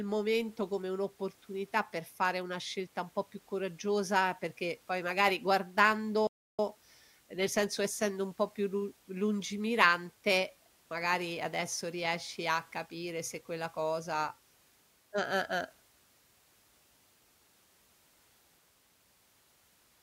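At 6.27 s the speech cuts out abruptly in mid-flow and the output falls completely silent for about 320 ms, picking up again at 6.59 s. This is a playback stall: the gap is dead silence rather than a fade or dropout noise, and then the sound resumes. The likely cause is the player running short of buffered data, or its playback thread being briefly blocked, so nothing reached the output until it recovered.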